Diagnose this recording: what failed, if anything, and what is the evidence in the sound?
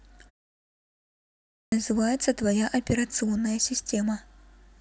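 Clipped start after a pause, in playback. After 1.2 s of silence, sound from 1.45 to 1.72 s is swallowed. The sleeping output device was still waking.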